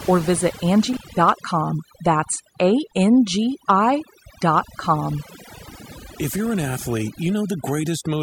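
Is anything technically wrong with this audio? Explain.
Yes. Overdone noise removal runs through the whole speech clip. The reduction was set so aggressively that any frequency band sitting near the estimated noise floor is pushed far down or cut entirely, and the quieter parts of the voice get swept away with the noise. The background drops away, leaving near-silent gaps between phrases that twinkle with isolated specks. On a spectrogram the background is almost black, scattered with small bright dots, and the voice's edges look ragged and eaten away.

An intermittent contact occurs at 0.93 s, right after "or visit", and lasts until 1.17 s. A loose cable or plug opened briefly, breaking the signal for about 180 ms. The speech drops out abruptly with crackle at both edges, and faint hiss fills the gap. In the waveform this shows as a sudden collapse to near-flat level with sharp spikes at the start and end. 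A spectrogram shows a vertical gap bounded by broadband clicks.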